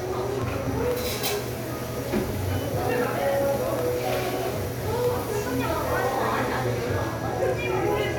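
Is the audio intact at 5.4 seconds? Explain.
No. At 5.4 s you're still inside a run of periodic USB or driver dropouts lasting from about 0.17 s to 5.67 s. Something keeps stalling the USB bus or audio driver every 0.125 s, so roughly a millisecond of the sound gets dropped and filled with silence each time, around fifty gaps in all. You hear a steady ticking, eight clicks a second, riding on the sound wherever there's signal to interrupt.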